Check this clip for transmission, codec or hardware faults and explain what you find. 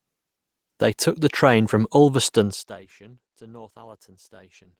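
No transmission, codec or hardware faults are audible: the speech arrives intact and continuous, with no dropouts, distortion, glitches or level problems.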